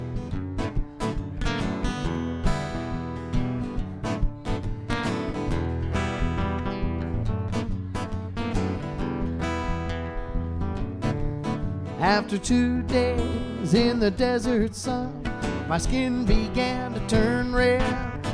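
Nothing in this recording stands out as a technical fault at any point, so there's nothing here to flag.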